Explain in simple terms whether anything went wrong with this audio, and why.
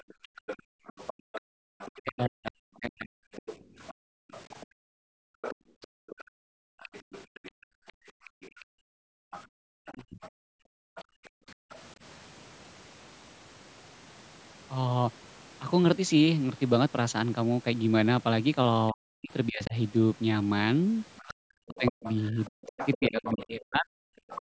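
A second voice, the other side's voice leaking through, can be heard faintly from the start to 11.75 s, and more clearly from 21.16 s to the end. Likely the echo canceller missed part of the loudspeaker sound.

The room sound also falls away sharply from 0.02 to 1.66 s and from 3.63 to 11.7 s, with a brief drop at 24.2 s. This is background gated by the echo canceller, which turned the microphone down while the loudspeaker played.

The main voice itself dips or breaks up from 1.94 to 3.35 s, 9.57 to 10.24 s and 18.91 to 23.87 s. This is speech suppressed in double talk, likely because both sides spoke at once.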